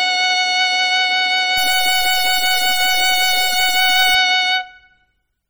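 MP3 compression runs through the whole music clip, and the damage is heavy. The sound has a watery, swirling texture, with faint parts of the mix flickering in and out as the encoder drops weak frequency lines from one frame to the next. Sharp attacks come out smeared. The thinness of the sound fits a bitrate around 32 kbps, which is likely the cause of so few bits to share out.

A stuck bit takes over from 1.58 s to 4.15 s. Over that span distortion rides on the music. This is likely a single data bit held at a fixed value by a broken line or converter, so about half of all samples land off by that bit's weight. The error follows the waveform itself, so the distortion shifts with the music. Quiet moments inside the span fill with noise.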